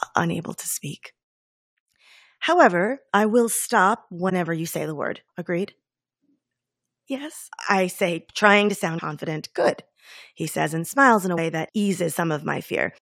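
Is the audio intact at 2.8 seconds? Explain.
Yes, at 2.8 seconds the speech plays through intact, with no dropout, click, distortion or other fault at that moment.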